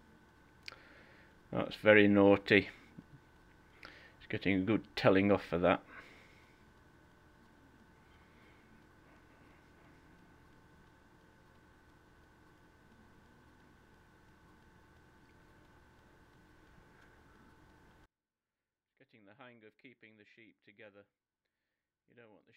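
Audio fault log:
18.06–22.56 s, one channel inverted: one stereo side likely has reversed polarity, so summing to mono cancels the shared sound, which drops about 33 dB.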